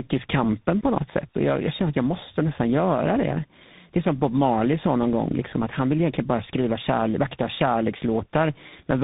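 From start to finish the speech carries tandem speech coding: it sounds like it passed through two speech codecs back to back, with the second working on the first one's already damaged output. The roughness and warble fit a GSM full-rate leg, and the grainy, hissy edge points to CVSD, probably with a plain G.711 hop between them. Nothing is left above 3.8 kHz, so everything sounds muffled and narrow, noticeably worse than any single link would.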